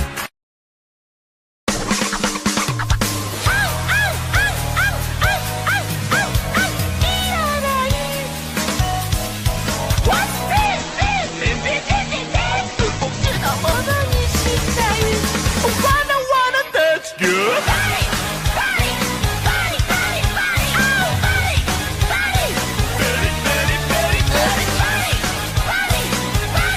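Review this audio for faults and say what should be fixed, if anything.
There's a call bitrate drop from 10.67 s to 13.35 s, where the sound suddenly goes rough and muffled for about 2.6 s before clearing up again. The bandwidth estimate collapsed, so the encoder was squeezed down to a tiny bit budget. It coded everything far more coarsely and chopped the top end from 20 kHz down to 8 kHz. That fits a fall from roughly 96 kbps to around 9 kbps. To prevent it, smooth the bandwidth estimator and set a sensible minimum bitrate so short estimate dips don't starve the encoder.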